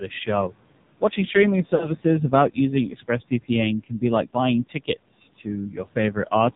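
Speech recorded over a mobile link shows three overlapping faults. Throughout, the AMR narrowband mobile codec limits the sound: nothing above 4 kHz survives, and the voice has a buzzy, synthetic edge from a vocal tract model driven by sparse pulses. The heavy damage fits a low mode around 5.9 kbps. A plain telephone band-limit would muffle the top without adding this coded, reedy buzz, so the buzz is what identifies the codec. Also present across the whole clip are noise suppressor artifacts. The room noise, sitting about 19 dB under the speech, is pushed down by about 18 dB in the gaps and returns under each phrase. This pumping follows speech activity, gating the noise in and out. From 1.76 to 1.91 s there are lost AMR speech frames. The decoder repeats the last good pitch and spectral shape with falling gain, so the sound is drawn out briefly and fades. It then comes back rough for a moment. 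The gap fits about 40 ms of concealed audio, roughly two frames. A network dropout would cut to hard silence or click, whereas this one decays smoothly and keeps a pitched tail.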